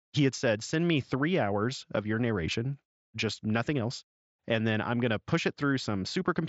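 Listening through this speech clip, carried over what sounds like a wideband Bluetooth headset link, nothing stood out.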